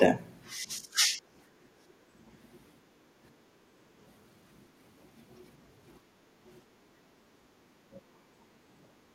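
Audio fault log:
0.57–1.22 s, 1.76–1.84 s and 7.99–8.18 s, speech suppressed in double talk: the speech sinks sharply. The longest dip runs about half a second and falls by roughly 25 dB, the brief one at 1.76 s by about 20 dB, and the late one by about 15 dB. The likely cause is the echo canceller failing to separate the near talker from the far side's loudspeaker echo playing at the same time, and turning the near talker down along with it.
3.12–3.16 s, 6.01–6.37 s, 7.13–7.25 s, 8.46–8.58 s and 8.96–9.13 s, background gated by the echo canceller: the room tone briefly ducks and then recovers, by about 7 dB, 13 dB, 8 dB, 11 dB and 7 dB respectively. The 6.01 s dip is the longest, at about 0.4 s. Each time the loudspeaker played, the canceller clamped the microphone down hard, so the ambience drops out and returns once it releases.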